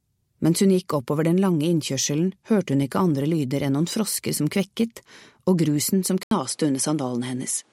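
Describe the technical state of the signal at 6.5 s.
An input switched to a poorer device, from 6.23 s through to the end at 7.73 s, is the likely cause of what is heard at 6.5 s. An 80 ms gap of silence marks the changeover, and after it the band stops at about 11.4 kHz, so the sound is duller and less open than before. A new, different background noise sits roughly 40 dB below the signal, while the overall level stays about the same.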